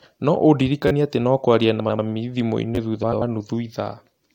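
At 0.88 to 0.91 s the speech hits a repeated buffer: new audio arrived late, so the device replayed a 10.7 ms chunk three extra times, which fits a 512-sample buffer. It is heard as a brief buzzy stutter with hard joins, and about 30 ms of audio is lost. From 1.80 to 1.99 s two neighbouring runs of frames were decoded out of order, consistent with four-frame blocks of about 93 ms each swapped in place. The stretch plays with its halves exchanged, giving a garbled flutter. At 2.75 to 2.77 s the same buffer repeat occurs with two extra plays, a shorter buzz losing about 20 ms. From 3.03 to 3.22 s a second pair of roughly 93 ms blocks is swapped, producing the same scrambled flutter.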